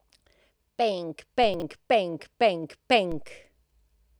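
A speech clip with two kinds of fault. Two low thumps land at 1.44 s and 3.12 s while the speech carries on untouched underneath. These are DC steps: the waveform's zero line suddenly jumps to a new offset, and the sudden shift in level is what produces the thump. Each offset then drains away gradually rather than snapping back, as if through a high-pass of about 2 Hz, so the thump has no matching click on its return. Just after the first thump, between 1.54 s and 1.62 s, the speech briefly sounds scrambled. This is chunks out of order: a short slice of audio is played back too late, after material that should have come after it. The jumbled span fits a 20 ms chunk that arrived about three chunks late. No sound is missing, but each of the three hard joins around the misplaced slice breaks the waveform, and that stretch comes out garbled.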